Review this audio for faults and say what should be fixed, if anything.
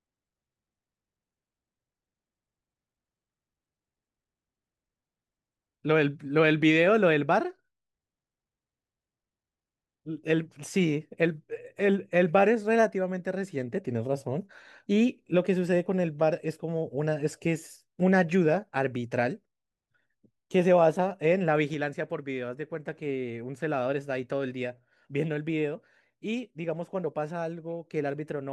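There's a sudden gain jump at 21.74 s: the level drops about 4 dB in one step and stays down to the end, noise floor included, likely an unramped gain change. Fix it by fading gain changes over a few milliseconds instead of switching them instantly.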